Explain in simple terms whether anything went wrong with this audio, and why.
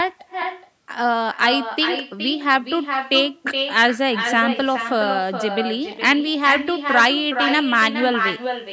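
Every phrase in this speech is shadowed, throughout the whole clip, by a quieter, thinner copy arriving a bit under half a second later. This is echo with no canceller: the far end's loudspeaker played the call into its microphone, and nothing removed that returning sound.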